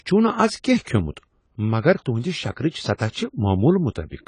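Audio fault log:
Throughout: AAC compression. The speech sounds dull and smeared, with the high end cut off and a plainly audible fizzy, warbling texture on sibilants and sustained sounds. This is likely low-bitrate AAC-LC coding, consistent with about 24 kbps, where the encoder drops high frequencies and coarsely quantises the rest.
2.70–2.74 s and 3.11–3.16 s: pre-echo. A brief hiss creeps in just ahead of two sharp onsets, lasting 36 ms and then 50 ms, and each attack lands softened. The codec spread quantisation noise sized for the loud attack across its whole transform block, filling the quiet moment before it.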